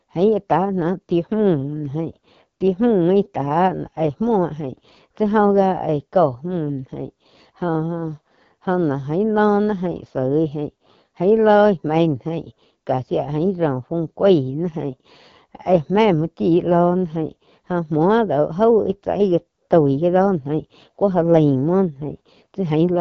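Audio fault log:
throughout AMR wideband (HD Voice) codec: the speech has been squeezed through the AMR-WB coder at one of its lowest modes, which fits 8.85 kbit/s. The pulse-driven vocal tract model has too few bits to follow the voice closely, so the speech comes out rough and raspy with plainly audible coding damage. Above 6.4 kHz only shaped noise stands in for real detail, and nothing at all remains above about 6.9 kHz.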